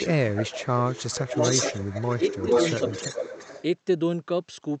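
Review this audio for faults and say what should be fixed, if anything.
A delayed copy of the speech trails the original by about 0.41 s, faintly at 0.00 to 0.06 s (about 15 dB below) and then strongly from 0.32 to 3.63 s (only about 5 dB below). This echo leak likely comes from a far-end loudspeaker whose echo canceller let its microphone pickup through. Better acoustic echo cancellation, or a headset at that end, would prevent it.

The speech dips and thins in bursts: 0.05 to 0.64 s, dropping as much as about 15 dB over roughly 0.4 s; 1.17 to 1.40 s, about 10 dB; and 2.18 to 2.24 s, about 5 dB. This is speech suppressed in double talk, likely caused by an echo canceller attenuating the near talker because it could not separate overlapping speech from echo. Proper double-talk detection would prevent it.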